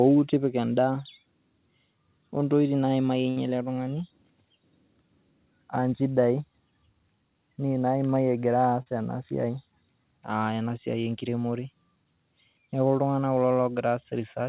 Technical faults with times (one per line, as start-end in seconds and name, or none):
3.30-3.38 burst of packet loss
8.82-8.88 short concealed packet loss